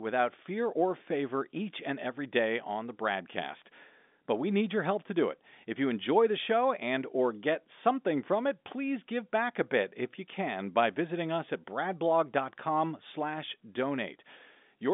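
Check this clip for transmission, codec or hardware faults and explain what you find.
Nothing stood out on listening to this speech, which comes across as an ordinary telephone-band recording with no transmission, codec or hardware trouble to point to.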